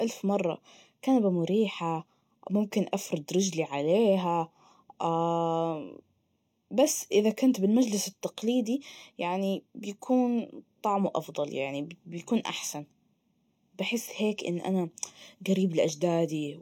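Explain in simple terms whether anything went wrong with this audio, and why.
Channel delay (comb filtering) runs from start to finish. One side of a two-channel recording lagged the other by about a third of a millisecond before they were mixed to mono, so sound they shared cancels at evenly spaced pitches, starting around 1.5 kHz. That gives the speech a hollow, phasey colour.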